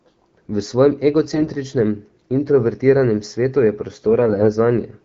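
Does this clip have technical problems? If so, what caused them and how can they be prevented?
Yes. AMR bit errors make the speech turn hoarse and gargly from 1.33 to 1.49 s, and again from 4.20 to 4.48 s. Flipped bits in weakly protected frame data misplace excitation pulses and skew pitch, gain and spectrum. The damage is heavier in the first burst, which fits an error rate near 10 percent, than in the second, nearer a few percent. To prevent it, improve radio link quality or use stronger channel coding.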